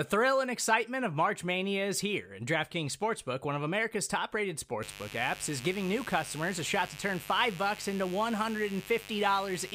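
From 4.82 s to the end, mains buzz sits under the speech: a steady, raspy drone at roughly 15 dB below the signal. Switching spikes leaking in twice per 50 Hz cycle build a dense ladder of 50 Hz harmonics, seen on a spectrogram as evenly spaced horizontal lines reaching several kHz.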